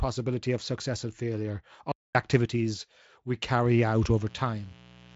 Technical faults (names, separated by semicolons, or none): playback stall; mains buzz